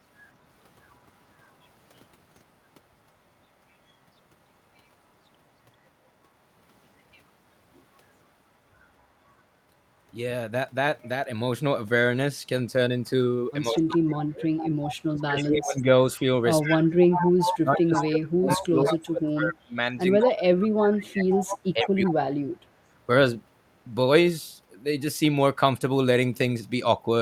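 At 13.7 s the echo canceller likely met double talk and, unable to tell the near talker from the loudspeaker return, pulled both down. This is speech suppressed in double talk: the voice sinks by roughly 30 dB until 14.45 s. The same clamping returns for far longer from 15.1 to 22.56 s, with about five seconds of that span dipped, thinned or cut away in pieces.

Overlapping these dips, an echo leak sounds where one side's canceller likely failed to strip its loudspeaker pickup and sent it back. A copy of the voice trailing by 142 ms appears from 13.79 to 14.96 s at about 10 dB under the speech. It is louder, about 5 dB down, from 16.62 to 19.3 s and from 20.26 to 20.68 s, then about 10 dB down again from 21.31 to 22.09 s. It is heard as a delayed, ghostly doubling.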